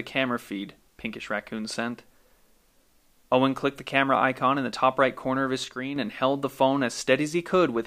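It's a speech clip with a sudden gain jump: at 5.64 s the level drops by about 6 dB in a single step, voice and background noise together, then snaps back up at 5.96 s. That's likely a gain setting applied digitally with no ramp at all.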